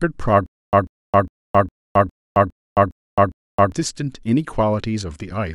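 From 0.46 s to 3.72 s the speech breaks into a stutter with silent gaps. A 141 ms fragment plays, then about 266 ms of dead digital silence, and that same fragment comes back eight times at a steady 408 ms pace. The likely cause is a stalled player or stream that replayed its last buffered piece on every retry before running dry, so whatever should have filled those three seconds is simply gone.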